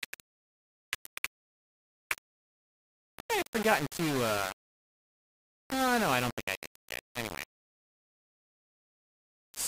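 Grainy, signal-following distortion runs through the whole clip, most likely from low bit depth without dither. The roughness rises and falls with the sound, turns quiet passages harsh and sputtery, and sits only around 10 dB below the signal, which fits rounding to about 4 bits. A dithered reduction would instead leave a steady, even hiss that stays put regardless of the sound, and fades would not collapse into crackling steps.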